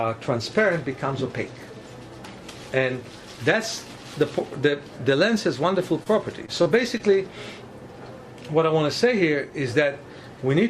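Short concealed packet loss strikes four times in quick succession, at 6.03–6.08, 6.46–6.50, 6.62–6.67 and 6.97–7.01 s. Each time about 20 ms of audio (40 ms at 6.62 s) failed to arrive, and the receiver extrapolated the preceding sound before crossfading back, producing brief smears or wobbles. A spectrogram shows smoothed, repeated harmonic or noise texture with a soft seam at each end.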